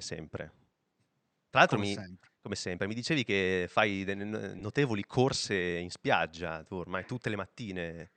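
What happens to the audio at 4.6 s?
Between 4.59 and 4.61 s, just after "dicevi che fai" and before "corse in spiaggia tu", lost LE Audio frames cause a brief dropout. About 20 ms of audio never arrived, which fits two 10 ms frames. The LC3 decoder filled the gap by repeating the last good spectrum with randomised signs, so the sound briefly turns into a short noisy smear before decoding resumes.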